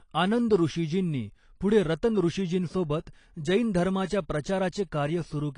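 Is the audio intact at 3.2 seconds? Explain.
No. At 3.2 seconds the speech has AAC compression throughout. Nothing sounds above 10.2 kHz, so it is dull, smeared and warbly. That likely fits low-bitrate AAC-LC, about 32 kbps.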